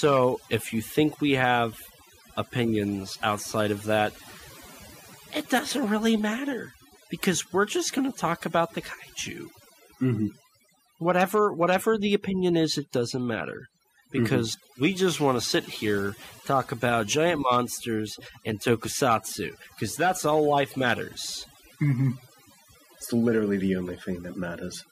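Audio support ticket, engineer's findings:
Overdone noise removal, throughout the clip. Background between phrases drops, left with twinkling specks. Probable component: noise reduction stage set too aggressive. Mechanism: individual frequency bands sitting near the tool's noise estimate get pulled far down or gated off, so quiet speech detail in those bands is removed along with the noise. Bands switching on and off frame to frame leave the isolated tonal specks in the gaps.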